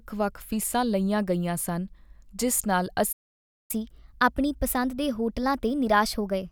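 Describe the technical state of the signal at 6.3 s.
At 6.3 s the speech is in a catch-up at higher speed, running from 3.71 s to the end. The player is resampling its backlog after a stall. Playback runs 1.15 times faster. Pitch rises by about two semitones, so the speech sounds hurried and slightly higher.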